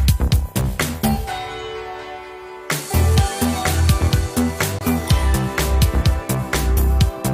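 A gap between stream segments occurs at 4.79 to 4.81 s. The timestamps of two consecutive segments, which fits 2-second segments, leave a hole that playback fills with silence. The result is a hard-edged dropout of about 22 ms, after which the sound resumes with nothing lost.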